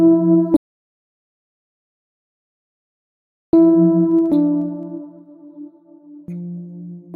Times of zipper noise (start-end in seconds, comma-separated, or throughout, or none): 4.01-5.29